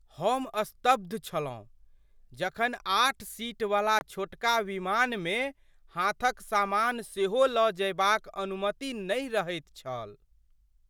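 A Bluetooth dropout falls between 3.99 and 4.01 s, right after "जखन आठ सीट वला" and before "छोटका विमानमे". The speech cuts to silence for about 21 ms, then returns further along, as if it had kept playing through the gap. The likely cause is a wireless audio packet that failed to reach the headphones in time and was discarded, and the gap's length fits a single lost packet.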